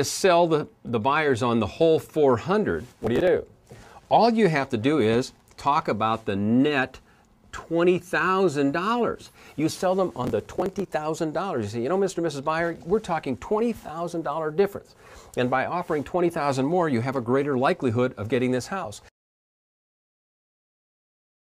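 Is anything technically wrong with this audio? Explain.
Yes. There are two bursts of processor overload crackle, at 3.02–3.27 s and at 10.24–10.91 s. The processor couldn't finish its short audio buffers in time, and the gaps point to buffers of around 5 ms. About 20 and then about 40 deadlines were missed again and again across the two stretches. Each miss skipped a buffer and left a tiny hard-edged gap, so the sound takes on a gritty, tearing crackle that stops once the load eases. The second burst lasts longer.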